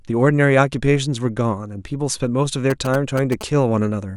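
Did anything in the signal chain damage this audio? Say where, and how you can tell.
Yes. From 2.70 to 3.43 s, GSM signalling bursts get into the analogue wiring: a nearby 2G phone's radio bursts are rectified into a galloping dit-dit-dit of short 217 Hz buzzes, roughly 10 dB below the speech. A spectrogram shows evenly spaced harmonic stripes; the waveform shows clustered sharp spikes.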